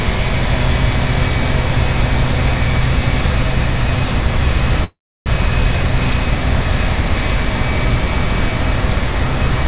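At 4.84 s the sound stops and a short fading fill takes its place, going silent for about 320 ms before resuming at 5.28 s, likely a call audio freeze from delayed packets. Nothing is lost; playback continues where it halted, about 0.42 s later, above a 4 kHz cut that fits G.711 mu-law.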